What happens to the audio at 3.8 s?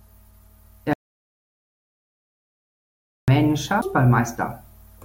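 At 3.81 s there is a CD skip. The laser was knocked or misled onto another turn of the disc's spiral, so the player mutes very briefly, for roughly 7 ms, and resumes from a different point on the disc. The speech jumps forward or back by a whole number of disc turns. That displacement is what separates it from a plain dropout, where the sound would pick up where it left off.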